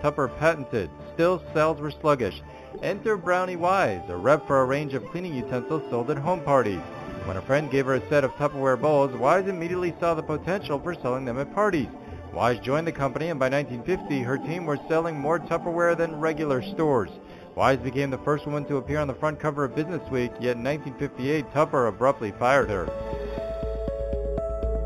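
Throughout, the top end sounds dull, with a faint metallic shimmer: imaging from linear upsampling, which left mirror copies of the spectrum between 4 and 8 kHz, roughly 30 dB down.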